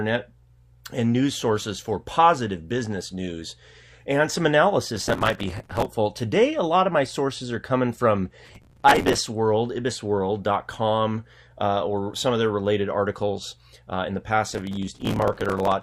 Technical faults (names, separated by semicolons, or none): processor overload crackle